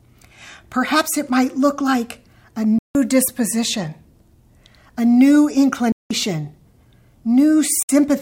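At 2.79–2.95 s, 5.92–6.11 s and 7.83–7.89 s, the speech cuts abruptly to silence for 0.16, 0.18 and 0.06 s, likely a Bluetooth dropout from late, discarded packets. Unlike a buffer stall, the speech resumes further on, skipping the gap rather than pausing.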